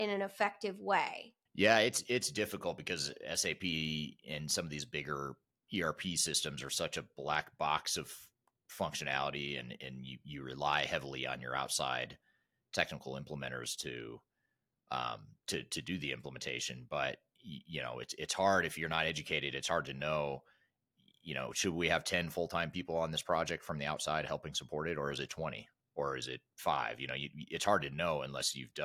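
No technical faults are audible.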